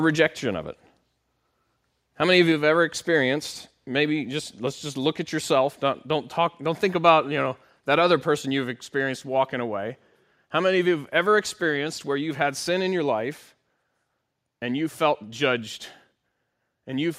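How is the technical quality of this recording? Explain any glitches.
There is one audible glitch. At 2.52 s, between "many of you" and "have ever experienced", the speech and its background fall together by about 2 dB in a single step. This is likely a microphone volume stepped down: call software judged the input too loud and cut the device's gain at once.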